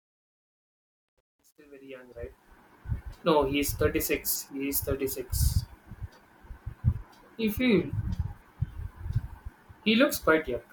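Truncation distortion on a fade runs from 0.00 to 2.52 s, through the fade-in. The gain stage drops the lowest bits without dither, and the graininess points to roughly 10 bits. The quietest part of the speech snaps to a few coarse square steps. It is worst from 0.00 to 1.98 s, where it sounds gritty before smoothing as the level rises.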